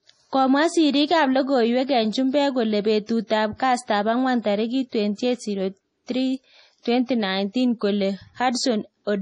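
A speech recording that carries heavy MP3 compression damage from start to finish, most likely from encoding at a low bitrate that fits about 32 kbps. Starved of bits, the encoder discards everything above 10.4 kHz and drops weak frequency lines that flicker on and off between frames, giving the sound a watery, swirling quality with smeared onsets. A spectrogram would show a flat ceiling at 10.4 kHz and patchy, blotchy energy below it.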